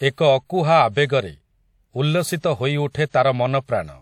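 Pre-echo appears from 2.90 to 2.95 s, where a brief hiss runs about 42 ms ahead of a sharp onset in the speech. The codec spread coding noise across its whole block, so noise sized for the loud attack leaks into the quiet gap before it, blurring the onset.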